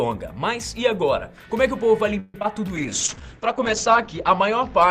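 From 2.19 to 2.36 s, the sound stalls for about 0.15 s as a call audio freeze. The last sound is stretched out, and nothing is lost. Delayed packets likely emptied the jitter buffer.

At 2.40 and 2.43 s, two short concealed packet losses follow. Each is about 20 ms of missing audio, patched from the preceding sound and heard as a brief smear.

From 2.76 s to the end comes a call bitrate drop from 64 to 8 kbps. Bandwidth narrows from 20 kHz to 8 kHz, so the sound turns coarser and duller. It sits at the lowest rate for about 1 s.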